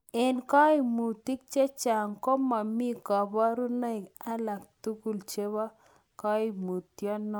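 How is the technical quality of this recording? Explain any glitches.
No technical glitches stand out anywhere in the speech recording; there is nothing to explain.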